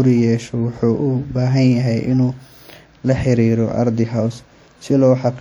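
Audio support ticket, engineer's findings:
WMA compression, throughout the speech clip. Ringing, washy smearing with hiss that swells and fades with the signal, likely from a low-rate WMA encode (consistent with around 48 kbps): long transform blocks spread quantisation noise over tens of milliseconds, weak components zeroed. Bandwidth reaches about 20.1 kHz.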